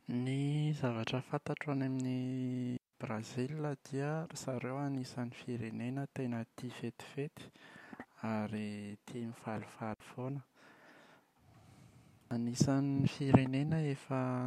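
At 2.77 to 2.93 s and 9.94 to 10.00 s, digital wireless dropouts mute the speech for 164 ms and 60 ms. Too much data is lost on the link, so the receiver fades out quickly. Each gap shows as a flat waveform and a blank vertical band on the spectrogram, with no noise on either side.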